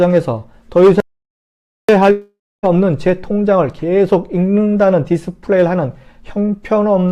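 At 1.00 s the sound just stops dead and stays off until 1.89 s, which is an audio dropout to silence. For about 0.88 s there's silence with no room tone underneath, so it sounds like the input vanished rather than the source going quiet. The likely cause is the input being cut off for a moment, a loose connection or a brief mute, while recording carried on writing silence. Whatever happened in that gap is simply gone.

Shortly after, at 2.11 s, there's a long network dropout running to 2.65 s. Roughly half a second of real audio never arrives, about 520 ms of it, and the receiver likely tried to cover the hole by stretching the last bit of sound into a fading buzzy smear. That smear dies out, leaving around 260 ms of silence before the audio jumps back in at 2.65 s, already past the part that went missing.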